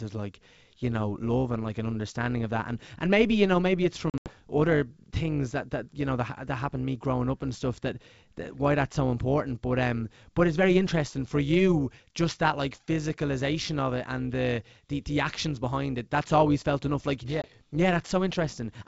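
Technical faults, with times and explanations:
Throughout: overlap-add ripple, a metallic buzz with extra tones around each note, rippling near 200 Hz, about 6 dB deep, from windowed frames rejoined with overlaps not summing to constant gain.
4.10 to 4.32 s, 17.42 to 17.46 s: packet loss on an ADPCM call, hard-edged silent holes after "you know maybe it's" and "felt enough like yeah", with speech returning briefly slightly distorted as the adaptive predictor resynchronises. The first hole is about 120 ms scattered over 160 ms, which fits several lost packets. The second is a single 20 ms gap.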